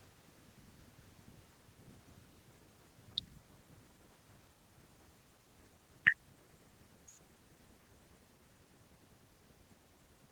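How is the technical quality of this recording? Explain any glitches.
The technical quality of this recording holds up, and there are no glitches to explain.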